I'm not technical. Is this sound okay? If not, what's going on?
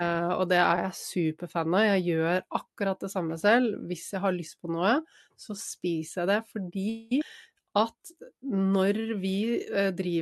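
No. This is speech sent over an internet call, and three things go wrong close together.

From 6.89 to 7.12 s there is a call audio freeze. The most likely cause is that pieces of the audio were held up on the way, so the receiving side briefly ran out of sound to play. Instead of going quiet, it drew out the last sound as a fading buzz or hiss for about 0.22 s. Nothing was lost, but a pause that wasn't there in the original speech has been added.

Right after, between 7.20 and 7.22 s, comes a skip ahead. A stretch of roughly a fifth of a second was dropped while later audio was already waiting. Playback jumps straight past it, so part of the speech is simply missing. The two sides are joined with almost no break, which sounds like an abrupt cut.

From 7.49 to 9.15 s there is a jitter buffer slow-down. The receiving side was rebuilding its reserve of audio. To do that it repeated tiny slices of the sound many times over, adding about 0.18 s in total. 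The speech here plays at about 90% speed while the pitch stays the same, so sounds are drawn out and can waver a little.

The call connection itself, which carries sound up to about 12 kHz, was working as it should.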